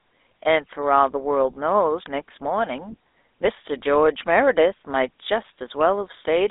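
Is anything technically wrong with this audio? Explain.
Yes. GSM full-rate codec damage runs throughout the speech, from start to finish. This early mobile codec models the vocal tract as a filter and drives it with a coarse, regularly spaced pulse excitation, keeping only a fraction of the excitation detail, which fits a 13 kbps coder. The result is a plainly audible buzzy, gravelly roughness on the voice. The line band is also narrowed to roughly 300 Hz to 3.7 kHz, so the speech sounds thin and telephone-like, with no low body and no high-frequency air.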